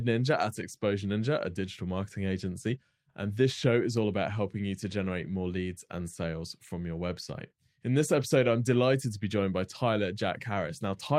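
Listening to this speech recording, nothing stood out as a technical problem at any point.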